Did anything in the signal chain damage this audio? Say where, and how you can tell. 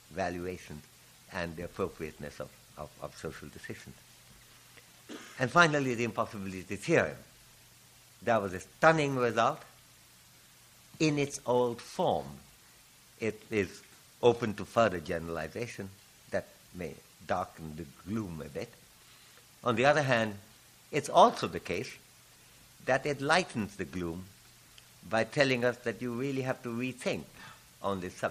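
No, nothing along the chain audibly damaged this audio, and there's no stage I'd point to.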